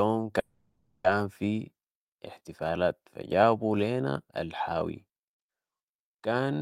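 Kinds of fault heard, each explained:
Call audio freeze: from 0.39 to 1.07 s the sound stalls, its last moment smeared into a fading buzz for about 650 ms, likely packets held up so the jitter buffer ran dry; it resumes at "في احتفالات فجابوا لينا" with nothing lost, just running later.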